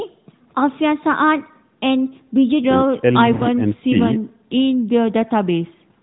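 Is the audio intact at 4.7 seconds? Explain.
Yes, at 4.7 seconds the speech is intact, with no dropout, glitch or other fault at that moment.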